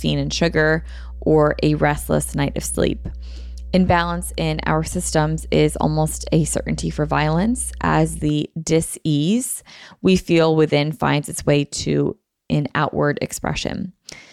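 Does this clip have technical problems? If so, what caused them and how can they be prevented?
Yes. Mains hum runs from 0.0 to 8.29 s, a steady 60 Hz tone sitting roughly 15 dB below the speech, where a ground loop or nearby transformer leaked the power line into the signal path. Prevent it with balanced cabling, a single grounding point, and distance from transformers.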